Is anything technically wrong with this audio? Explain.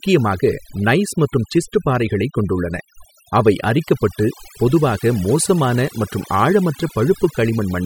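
Yes. Throughout the speech there is overdone noise removal. A noise reduction process was applied far too aggressively, so individual frequency bands that sit near its noise estimate get pulled down hard or switched off entirely, and the quieter components of the speech are taken out along with the noise. The result is a background that drops and is speckled with twinkling artefacts.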